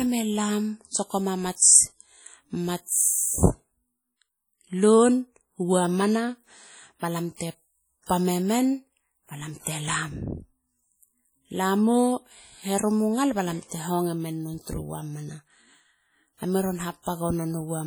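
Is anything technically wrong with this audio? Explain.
Yes, there are two related problems. Across the whole clip the speech sounds heavily coded: ringing, a bit washy, with a hiss that swells and fades along with the talking. That's most likely WMA compression at a low bitrate, around 32 kbps from the sound of it. The encoder's long transform blocks spread quantisation noise over tens of milliseconds, and at that rate the weaker spectral detail just gets zeroed, which leaves the ringing, washy texture.

You also get pre-echo three times: from 0.88 to 0.94 s (about 57 ms), 7.37 to 7.40 s (about 36 ms), and 17.02 to 17.06 s (about 41 ms). In each case a sharp onset lands late in a block, so the noise budgeted for the loud part leaks into the quiet stretch just before it. You hear a brief hiss ahead of the attack, and the attack itself comes out soft and blurred.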